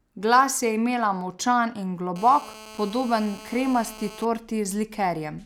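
A speech clip with GSM phone buzz from 2.16 to 4.25 s, starting just after "je imela močan in". A nearby 2G phone in a call pulses its transmitter about 217 times a second. The audio circuit rectifies those pulses. The result is a steady, raspy 217 Hz buzz with many harmonics, about 19 dB below the speech.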